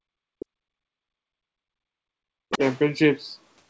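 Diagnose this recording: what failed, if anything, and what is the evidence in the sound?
Background gated by the echo canceller, at the call-processing stage: from 0.00 to 0.07 s the room tone drops by about 34 dB and then returns. Because only the background ducks, this is gating rather than a network dropout.

Speech suppressed in double talk: from 0.35 to 2.61 s the speech repeatedly dips and chops, at worst around 40 dB down. The likely cause is the canceller treating the talker as echo.

Other side's voice leaking through: from 2.50 to 2.79 s a second voice sits roughly 10 dB under the talker, likely residual echo the canceller failed to subtract. It is not crosstalk.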